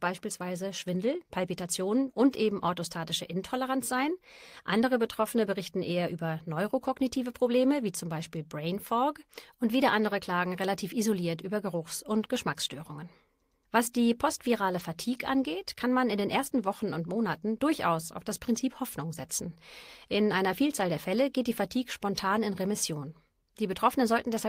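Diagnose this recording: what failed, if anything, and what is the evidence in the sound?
Network: lost packet rebuilt from error correction at 6.87–6.89 s and 14.79–14.81 s. Each is a 20 ms rough, noisy patch with no waveform gap, which fits one lost packet replaced by the next packet's low-bitrate copy.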